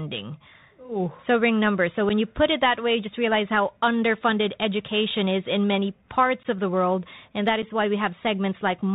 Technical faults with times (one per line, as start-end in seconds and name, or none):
0.00-8.94 Bluetooth CVSD headset codec
2.09-2.11 unconcealed Bluetooth headset packet loss
6.43-6.46 unconcealed Bluetooth headset packet loss
7.62 unconcealed Bluetooth headset packet loss